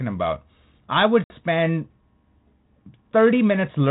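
Just after "about I would", from 1.24 to 1.35 s, a hard-edged silent gap of about 60 ms opens, then the speech returns briefly disturbed. This is packet loss on an ADPCM call: a few packets vanished, knocking the 32 kbit/s G.726 decoder's predictor and step size out of sync.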